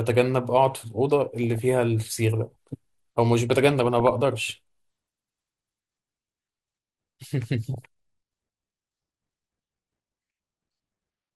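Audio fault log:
throughout: MP2 compression, likely from a low bitrate near 80 kbps. Upper sub-bands drop out and coarse quantising leaves the speech dull and gurgling.
1.37–1.60 s, 3.71–4.25 s, 7.65–7.84 s: DAB burbling. Bit errors slip past error correction. Corrupted scale factors make single sub-bands jump, giving short bursts of burbling over the speech.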